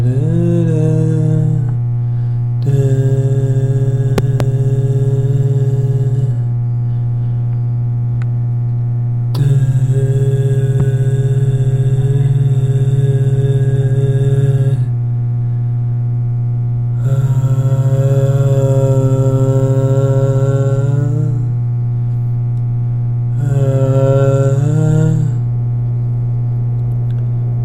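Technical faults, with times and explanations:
4.18–4.43 s, loud pop: a sharp double pop, well above the sound, which carries on beneath it. This is likely from a voltage pulse from a plug, switch or static.
10.80–10.82 s, loud pop: a single short thump, somewhat softer, over continuing sound. This is likely an electrical spike reaching the signal chain.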